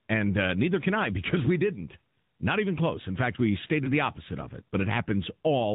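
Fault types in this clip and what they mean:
AMR narrowband mobile codec: The whole clip has passed through the AMR-NB mobile speech codec at 10.2 kbps, with its damage plainly audible. The audio is sampled at 8 kHz and rebuilt from a vocal tract model driven by a pitch predictor and a few pulses every 5 ms, so nothing above 4 kHz survives. On a spectrogram the energy stops at a hard ceiling at 4 kHz, and the speech has a synthetic, buzzy quality.
lost AMR speech frames: Around 3.84 to 3.91 s one speech frame failed its checksum, which points to about 20 ms of lost audio. The decoder filled the gap by reusing the last good pitch and vocal tract settings at a falling gain, so the speech briefly dips or warbles and then comes back weak or rough for a moment. A waveform shows a short sag in amplitude there, and a spectrogram shows a smeared, repeated harmonic pattern where the detail drops out.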